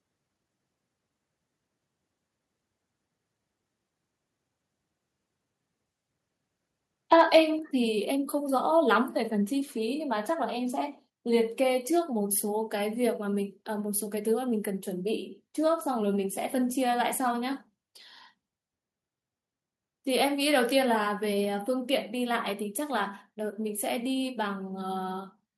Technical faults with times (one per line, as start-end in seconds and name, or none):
7.12-7.39 microphone overload
7.59 microphone volume stepped down
21.45 microphone volume stepped down